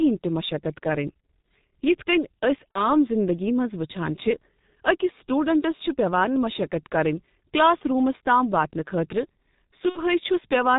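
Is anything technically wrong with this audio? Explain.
Yes. Throughout, the speech sounds muffled and hoarse, with no brightness above the telephone band and consonants smeared into one another. This is the G.723.1 codec at about 6.3 kbit/s, heavily degraded here. It discards everything above 4 kHz and encodes the voice in coarse 30 ms frames, refreshing its model of the vocal tract so slowly that quick articulations blur and the tone turns rough and breathy.

At 2.73 to 2.90 s, and again at 9.89 to 10.03 s, the speech briefly turns into a stretched tone or coloured noise that fades, then takes a moment to recover. This is VoIP packet loss concealed by the speech codec. The first gap fits roughly one lost 30 ms frame, the second about 60 ms. The decoder fills each gap by repeating its last pitch and filter at falling gain, and because every frame depends on the previous one, the distortion persists after audio resumes.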